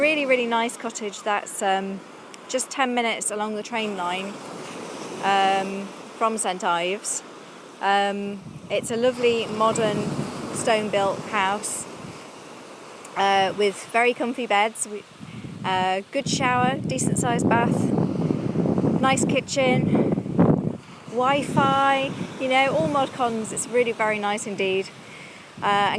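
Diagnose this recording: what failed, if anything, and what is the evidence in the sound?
Nothing in the signal chain shows a failure: no stage, from analogue wiring through conversion, processing, transmission and playback, leaves audible evidence of a fault.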